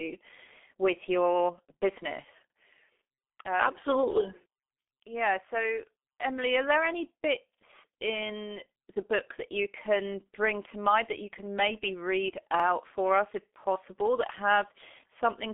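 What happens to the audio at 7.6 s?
Between 7.55 and 7.60 s there is an overlapping-chunks fault. The next processing block begins before the previous one ended, so about 48 ms of audio plays twice at the join, a spacing that fits 5 s chunks. It sounds like a brief stutter or click. Unlike a dropout, nothing goes missing; the sound is doubled rather than gapped.

The whole passage, this moment included, carries heavy G.723.1 codec damage at 6.3 kbit/s. Nothing reaches above 3.6 kHz, and the coarse frame-by-frame modelling leaves the speech muffled and hoarse, with smeared consonants. That rough, grainy texture is what separates it from a plain low-pass filter, which would only dull the sound.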